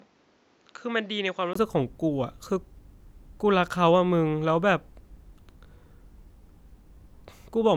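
An input switched to a poorer device from 0.0 to 1.55 s in this speech clip: the sound is dull, quieter, with its own background noise about 35 dB below the speech, and cut above 7.6 kHz, likely another microphone, clearing after a 20 ms gap.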